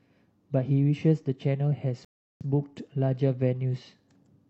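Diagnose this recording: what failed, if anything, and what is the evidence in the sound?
A rebuffering stall at the playback stage. The speech drops to silence from 2.05 to 2.41 s, then resumes exactly where it stopped. Nothing is lost, but about 0.36 s is added.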